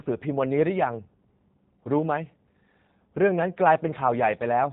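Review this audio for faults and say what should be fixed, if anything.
The whole clip carries G.729 codec damage, and it is plainly audible. The speech has been rebuilt from a vocal tract filter, a pitch predictor and a few pulses per 5 ms subframe rather than transmitted as a waveform. That modelling gives it a rough, synthetic texture, and nothing remains above 4 kHz, which fits an 8 kbit/s G.729A path. To prevent this, capture or route the audio over a wideband or lossless path instead of a narrowband VoIP link.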